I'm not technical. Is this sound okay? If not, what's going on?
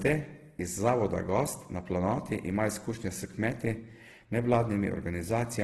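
No. Throughout, the speech sounds rough and grainy, with a noisy texture rather than the swirly, watery warble of MP3, and nothing above about 12.1 kHz. That pattern points to heavy Opus compression, likely from squeezing the audio into too small a file.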